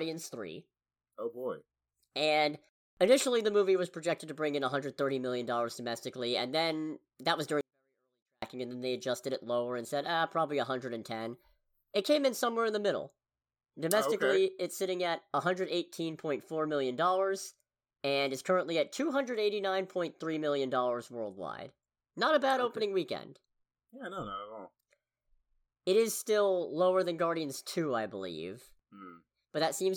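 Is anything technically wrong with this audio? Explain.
Yes. From 7.61 to 8.42 s, after "and then that was", a 24-bit alignment error reads low-byte 24-bit samples as 32-bit, dropping the speech a clean, abrupt 48 dB, faint but undistorted, unlike a dropout.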